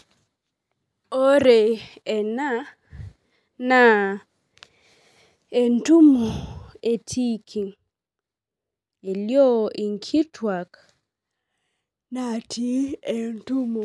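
No dropouts, clicks, level jumps or timing breaks turn up anywhere in the recording; the speech runs uninterrupted with nothing to flag.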